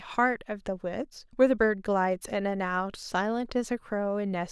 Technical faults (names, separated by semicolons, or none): none